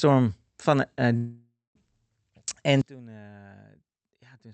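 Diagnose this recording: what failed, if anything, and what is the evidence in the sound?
Network stage: from 1.17 to 1.77 s the speech stops and a fading buzz carries on for a bit before quiet, then audio resumes minus the gap; a long network dropout, likely.

Digital gain stage: at 2.81 s everything, speech and background alike, drops about 24 dB in one step and stays down to the end, likely a sudden gain jump without a ramp.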